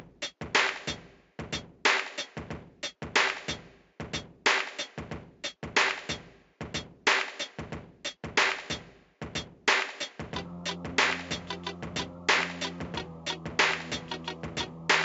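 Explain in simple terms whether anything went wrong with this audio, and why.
Nothing went wrong here; it's just a recording of sounds, and there's no glitch or problem to point to anywhere in it.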